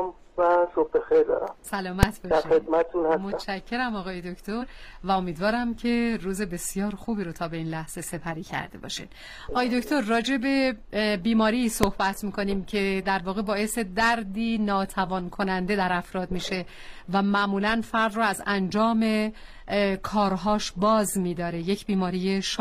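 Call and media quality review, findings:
Invalid numbers at full scale, 2.03 s and 11.83 s: two single sharp bangs. A processing stage likely produced infinite or invalid values that clamped to maximum amplitude for 2.9 ms and 0.73 ms blocks, which fit 128-sample and 32-sample processing blocks.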